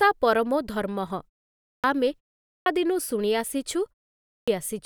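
At 1.58, 2.44 and 4.23 s, a clipped start after a pause swallows roughly 0.22 to 0.26 s of speech as the output wakes after gaps of about 0.3 to 0.4 s. Speech bursts in abruptly, and the waveform and spectrogram show a hard vertical edge with no onset.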